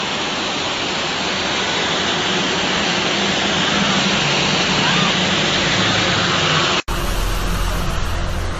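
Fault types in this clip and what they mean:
Generation loss: The whole clip sounds swirly, smeared and hollow, with blurred attacks and nothing above 18.9 kHz. This is more damage than one encode would cause. It likely comes from about ten passes through a lossy codec, consistent with AAC at 64 kbit/s.
Input switched to a poorer device: Until 6.88 s the sound is dull and boxy, with nothing above 7.6 kHz and faint added noise about 50 dB down. An 80 ms gap follows, then fuller sound, about 5 dB different in level. A likely input change explains it.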